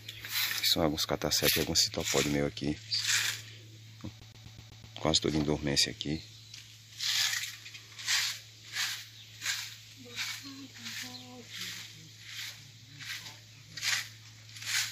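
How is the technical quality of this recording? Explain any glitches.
The recording has one glitch. CD stuck on one turn, 4.20 to 4.95 s: a scratch kicks the laser back a track, looping the same 126 ms of sound six times with brief mutes, a quick, even stutter.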